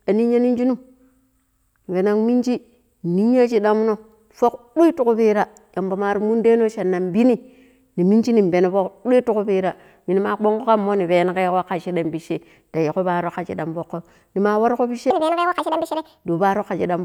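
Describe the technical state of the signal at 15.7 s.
At 15.7 s the audio sits inside a section at the wrong speed, running from 15.10 to 16.25 s. The speech there plays back at 1.63 times its recorded rate, so timing and pitch rise together: syllables are compressed and hurried, and the voice is lifted by close to ten semitones, giving a thin, chipmunk-like quality. The likely cause is a resampling or clock mismatch that applied the wrong rate to this segment.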